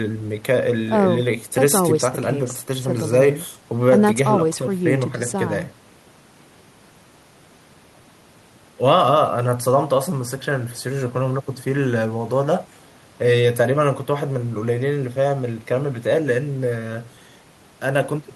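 The speech recording has no technical faults, and the signal stays intact and continuous throughout.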